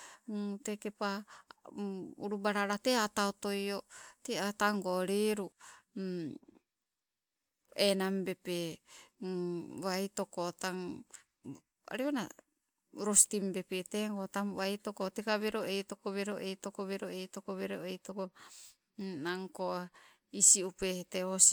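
No technical faults can be heard anywhere in this speech.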